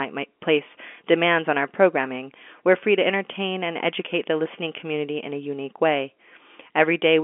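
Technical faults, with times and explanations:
No technical faults are audible anywhere in this recording.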